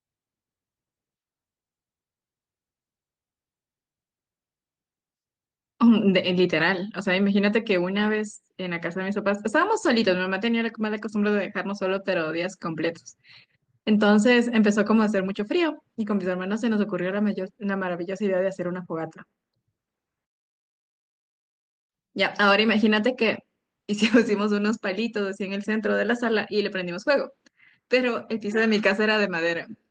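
There are no technical faults to describe in this speech, which carries the mild character of Opus voice compression at 24 kbps.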